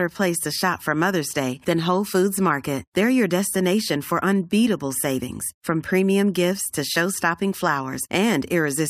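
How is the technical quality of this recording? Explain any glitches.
No technical faults turn up anywhere in the recording, so there are no glitches to explain.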